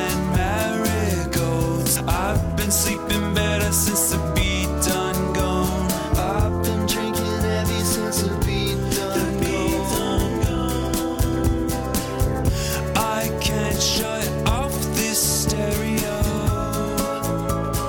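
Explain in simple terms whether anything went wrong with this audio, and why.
Nothing went wrong that I could hear; listening closely, nothing in this audio stood out as a problem.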